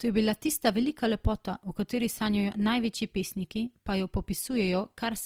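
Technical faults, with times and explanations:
Throughout, Opus compression: the speech sounds grainy and rough, with a noisy, hashed texture in place of clean detail, though the full bandwidth remains. There is less swirling and fewer hollow gaps than with MP3, which points to likely Opus music-mode coding at a low rate near 24 kbps.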